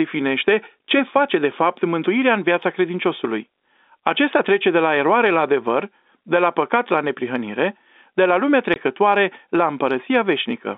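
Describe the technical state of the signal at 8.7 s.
A brief dropout from 8.74 to 8.76 s: packet loss filled with silence, where one lost 20 ms packet was replaced by hard-edged silence.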